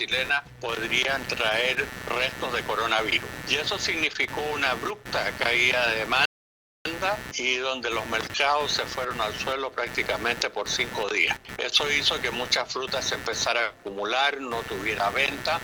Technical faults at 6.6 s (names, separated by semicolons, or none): computer activity noise; rebuffering stall